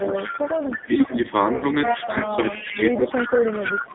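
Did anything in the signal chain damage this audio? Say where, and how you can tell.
Yes. The AMR narrowband mobile codec at 5.9 kbps damages the whole clip: a spectrogram shows nothing outside 150 Hz to 3.7 kHz, and the speech sounds buzzy and synthetic.

Echo leak, likely from a loudspeaker talker's echo canceller letting some pickup through, adds a copy delayed 322 ms at 0 to 1.31 s, 1.86 to 2.09 s and 2.25 s to the end. It sits about 10 dB below the speech, then about 5 dB below, and shows as a shifted, fainter repeat of the waveform.

Speech suppressed in double talk gives envelope dips at 0.86 to 0.93 s, 1.86 to 2.82 s and 3.23 to 3.52 s, of about 10 dB and about 15 dB at the last. An echo canceller was likely ducking both sides during overlap.

Lost AMR speech frames hit 1.56 to 1.66 s, a 60 ms gap that fits three 20 ms frames. The decoder stretches the last sound and fades its gain, which appears as a smeared, decaying band before recovery.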